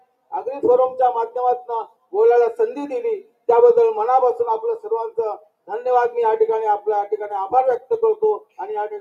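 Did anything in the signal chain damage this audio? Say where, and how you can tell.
Yes. The damage is in call processing: a noise suppressor built for speech was left on across the whole clip, so we've got a noise suppressor applied to music or sounds. You can hear the level breathing by something like 5 dB as it keeps deciding that steady, sustained material is noise and pulls it down, while sharper onsets slip through. That leaves the sound pumping and a bit thinned out the whole way along.

On top of that there are four spots of sound cut by the noise suppressor, where it clamps down much harder: 0.00 to 0.32 s and 1.87 to 2.13 s (dips of about 19 dB), then 3.23 to 3.45 s and 8.40 to 8.59 s (about 18 dB). Each bites for roughly a fifth of a second or a bit less. The held or decaying parts sink sharply, and tails get chopped short.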